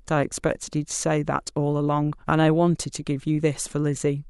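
No technical faults are audible anywhere in the speech.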